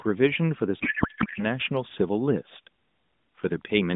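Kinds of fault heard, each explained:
Codec payload misread: from 0.80 to 1.47 s, octet-aligned AMR frames are unpacked as bandwidth-efficient, so every field shifts and the speech turns into garbled, warbling noise that barely follows it. Unlike packet loss, nothing goes silent or fades; the decoder confidently renders nonsense.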